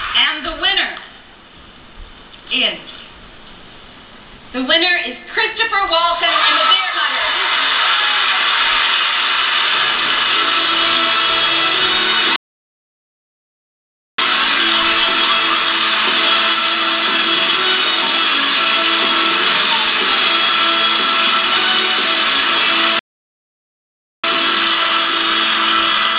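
Playback stalls at 12.36 s and 22.99 s: the sound cuts off mid-flow and goes silent for about 1.8 s, then about 1.2 s, before resuming. The player likely ran short of buffered data or had its thread blocked until it recovered.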